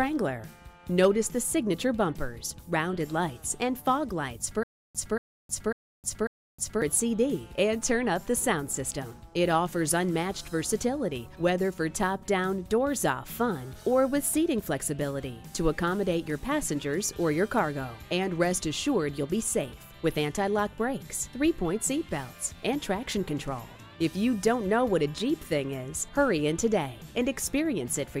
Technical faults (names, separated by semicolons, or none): stutter with silent gaps